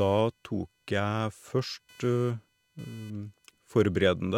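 Computer activity noise runs through the whole speech clip: a faint buzzing, chirping texture sitting roughly 35 dB below the voice, pulsing at around 500 Hz. Processor or graphics load shifts the ground shared with the audio circuit, so the interference follows the computer's workload rather than the speech. On a spectrogram it appears as a comb of harmonics from about 500 Hz upward, visible in pauses; the waveform shows a low, irregular fuzz between phrases.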